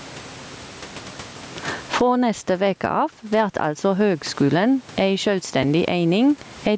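Throughout the speech, the level pumps by around 20 dB: loud and soft parts end up closer in level and the sound is squashed, likely gain set far too high with a fast limiter. At 5.63 s, chunks out of order: a roughly 5 ms chunk plays one chunk late, giving a brief jumbled moment with three hard joins.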